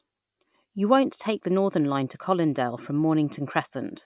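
No technical faults can be heard in this recording. Nothing in the speech draws attention to the audio path at any point.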